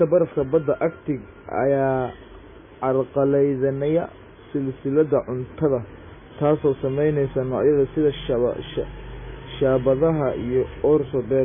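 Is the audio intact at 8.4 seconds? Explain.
No, at 8.4 seconds the speech still carries the MP3 compression damage that runs through the whole clip. Weak frequency lines flicker frame to frame, giving a watery, swirly sound with smeared attacks, likely from a very low bitrate around 16 kbps.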